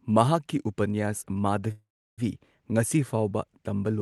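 At 1.71 s the speech stalls for about half a second in a call audio freeze. A brief fading buzz gives way to silence. Speech resumes at 2.20 s when the held-up packets arrive, likely after their delay let the jitter buffer run empty.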